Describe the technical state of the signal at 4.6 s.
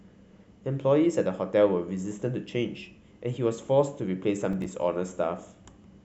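A burst of gritty crackle runs from 4.53 to 4.66 s: processor overload crackle, as several buffers of a few milliseconds each miss their deadlines and drop to silence.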